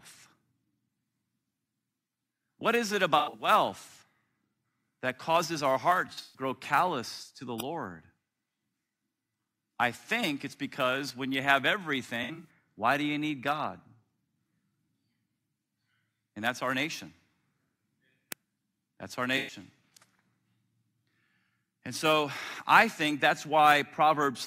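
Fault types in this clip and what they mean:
AAC frame loss with concealment: lost AAC frames get patched from the previous good spectrum, so the speech picks up four brief smeared, phasey patches of roughly 0.1 to 0.2 s each.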